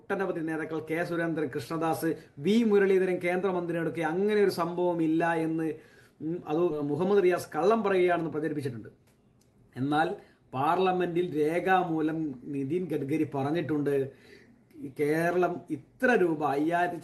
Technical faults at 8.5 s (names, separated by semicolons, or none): jitter buffer speed-up